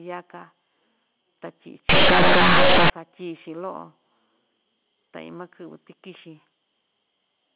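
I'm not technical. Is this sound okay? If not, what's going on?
No. From 1.89 to 2.90 s there's companded audio read as linear: squeezed telephone-style data is played back raw, so the speech turns into harsh, loud buzzing.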